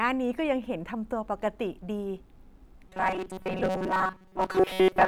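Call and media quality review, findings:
Robotic sound from repeated short buffers, 2.89–5.08 s: rigid metallic 188 Hz buzz; likely playback underrun looping a roughly 5 ms block, most audio skipped.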